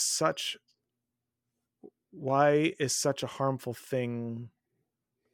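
From 2.12 s to the end, the resampler restarted on every block, converting each 40 ms block without its neighbours' samples, so every block edge carries a small error. The result is a steady 25 Hz buzz of ticks riding on the speech.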